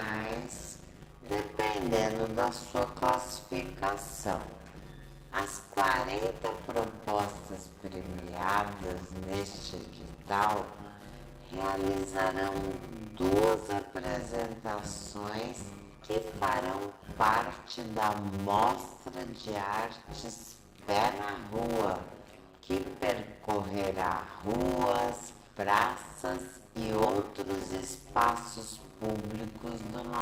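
From start to finish the sound carries a steady 100 Hz buzz and drags along at just over half its proper speed, about 0.53 times normal, while its pitch stays roughly where it should be. This is a block size mismatch (padded): one stage hands over shorter blocks than the next stage collects, which fits 256-sample writes, and the shortfall in each block is filled with silence. Those regular gaps stretch the timing and chop the sound a hundred times a second.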